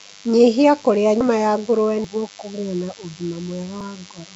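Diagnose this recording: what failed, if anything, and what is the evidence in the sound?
A thin, steady buzz runs under the whole clip. It sits at 100 Hz and carries a dense stack of harmonics, about 25 dB below the speech. This is DECT cordless phone buzz, and it enters at the analogue wiring stage. A DECT handset or base nearby transmits a short radio burst every 10 ms. The audio circuitry rectifies those bursts, and each one becomes a tiny pulse. That repetition makes the 100 Hz tone and its harsh overtones.

The speech has a rough, hissy halo and a smeared, underwater colour throughout. The damage is plainly audible. The likely cause is Nellymoser compression, the old Flash microphone codec, at a low bitrate around 32 kbps. It codes short blocks with very few bits per sample. Weak frequency bands get no bits at all and are refilled with noise. That noise fill produces the hiss and the blurred texture.

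There are three sudden jumps, at 1.21 s, 2.04 s and 3.81 s. Each is a jump with the sound skipping forward, with no gap of silence. The first falls just before "ya ngũrũwe". The second comes right after "ya ngũrũwe" and just before "kũgĩa na". About a tenth of a second seems missing each time. This points to a dropped buffer (overrun) at the driver or buffer stage, likely the software failing to collect samples before the hardware overwrote them.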